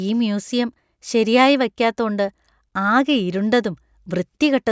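No audible technical faults turn up anywhere in this speech recording; the signal carries through without any disturbance that a careful listener would pick out.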